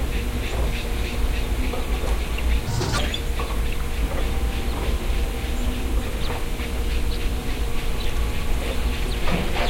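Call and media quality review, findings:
Audio read two samples at a time (double speed), 2.67 to 2.98 s: sound runs at 2.0x, an octave high. Stream reader likely misinterpreting format, taking sample pairs as one frame (channel count or sample-width mismatch).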